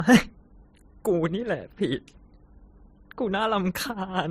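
From start to finish, the speech carries two overlaid kinds of coding damage, likely from transcoding between lossy codecs. The first stage, which sounds like a low-bitrate MP3 near 35 kbit/s, leaves its own coding artefacts. The Opus encode that follows, consistent with about 48 kbit/s, spends its bits reproducing those artefacts and adds its own on top. Nothing sounds above 15.7 kHz, the lowest cut-off in the chain.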